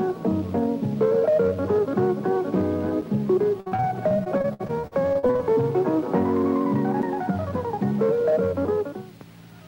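Two gaps between chunks appear as brief holes of 6.5 ms at 3.01 s and 7.02 s. They are spaced 4 s apart, which fits audio delivered in 4-second chunks with a small silence left at each join. No sound is lost, but the flow is interrupted there. From 3.6 to 5.41 s, repeated packet loss gives a choppy, robotic texture. Nineteen gaps, the longest 58 ms, leave about 360 ms missing. The receiver also patches 530 ms by extending the previous sound, so roughly 29% of that stretch is concealed rather than real audio. From 7.15 to 7.77 s, a jitter buffer speed-up makes the sound run at 106% speed with unchanged pitch, giving a hurried feel. The receiver trimmed around 50 ms in short pitch-period slices to reduce excess buffered delay.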